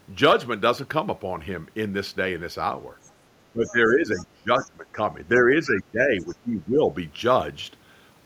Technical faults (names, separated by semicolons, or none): speech suppressed in double talk; other side's voice leaking through